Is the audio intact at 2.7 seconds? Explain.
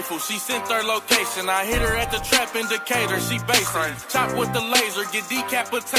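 Yes, the audio is intact at 2.7 seconds, with no dropout, glitch or other fault at that point.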